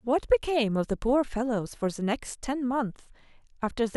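A speech recording with nothing technically wrong in it.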